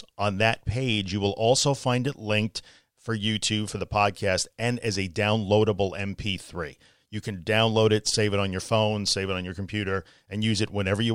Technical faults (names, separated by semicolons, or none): none